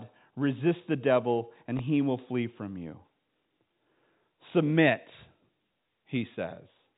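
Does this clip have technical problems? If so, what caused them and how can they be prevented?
No, this speech clip has no technical problems to fix. It carries the narrow sound of G.711 telephone coding, with nothing above about 3.8 kHz.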